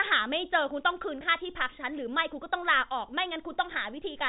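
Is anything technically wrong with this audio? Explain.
No, the speech simply carries the expected character of G.711 telephone coding, with nothing above 4 kHz and a faint level-following quantisation hiss, and no fault is audible.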